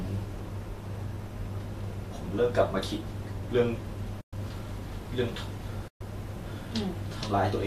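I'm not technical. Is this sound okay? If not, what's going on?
No. Two short stretches of this speech were lost in transmission, a fault called AAC frame loss with muting. When pieces of the compressed stream never arrived, the decoder filled the gap with silence. You hear the voice fade away and come back from 4.21 to 4.33 s (about 120 ms) and again from 5.88 to 6.01 s (about 130 ms). The speech around the gaps carries a light coding texture, likely from low-delay AAC compression of the kind used in video calls.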